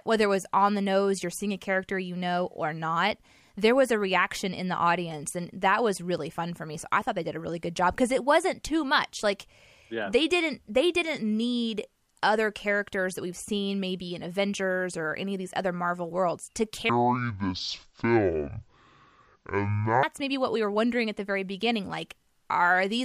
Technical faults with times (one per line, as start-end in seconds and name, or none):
16.89-20.03 section at the wrong speed